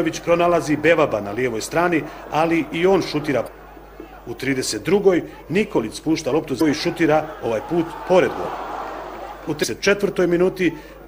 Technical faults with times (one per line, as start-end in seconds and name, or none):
3.44-3.48 damaged data in a compressed stream
6.57-6.61 damaged data in a compressed stream
9.60-9.65 damaged data in a compressed stream